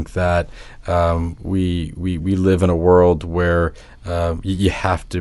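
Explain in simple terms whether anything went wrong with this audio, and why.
Listening through the recording, nothing stood out as having gone wrong with the sound.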